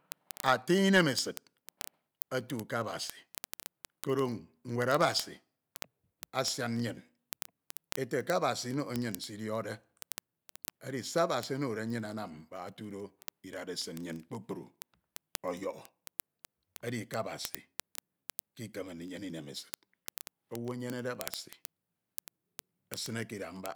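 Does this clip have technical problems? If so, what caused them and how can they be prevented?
Yes: word clock ticks from 0.12 to 23.75 s, single-sample slips roughly every 30 ms, unlike random clicks, because an unlocked receiver clock drifts several hundred ppm. Prevent it by slaving the receiver to the sender's word clock.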